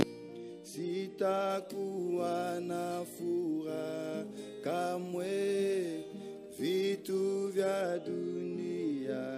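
Pre-emphasis left on, 1.50 to 7.81 s: a CD-style treble boost was never de-emphasised, leaving 10 kHz about 8 dB hot, sounding thin and sibilant.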